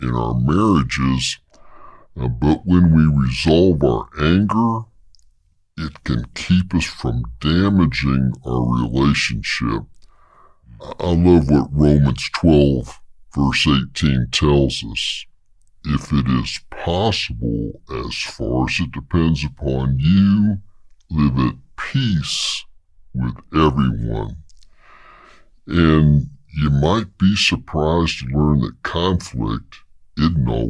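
Wrong sample rate throughout the clip: the audio plays at 0.689 times its proper speed and 6.45 semitones low, slow and heavy, because samples are read out faster or slower than captured without conversion. The ratio fits 32 kHz material played back at 22 kHz.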